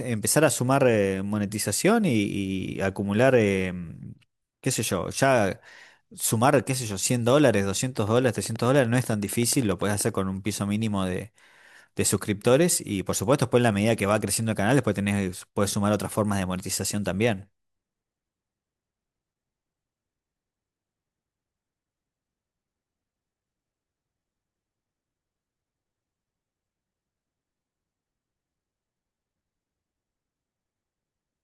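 From 7.98 to 10.02 s, likely interference from nearby equipment or a faulty connection injects a train of clicks: around twenty near-identical pulses at a steady 10.3 per second, peaking a few dB above the speech and ticking over both the talking and the pauses.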